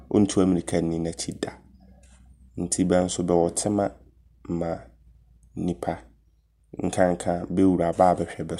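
No technical faults can be heard at any point in this recording.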